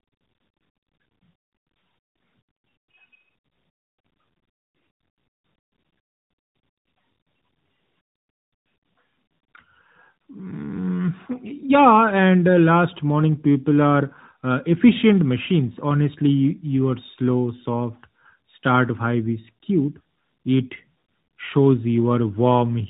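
Tandem speech coding runs throughout: the speech is decoded and re-encoded through CVSD, G.711 A-law and AMR-NB at 12.2 kbit/s in turn, each coder inheriting the last one's damage. Nothing remains above 3.8 kHz, so it sounds muffled, gritty and warbly.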